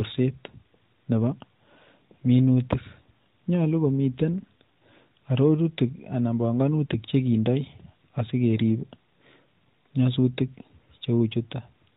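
No technical faults can be heard in this speech clip. It has come through an AMR narrowband mobile codec, so nothing above 4 kHz is present, and the light coding texture fits the codec's top 12.2 kbps mode.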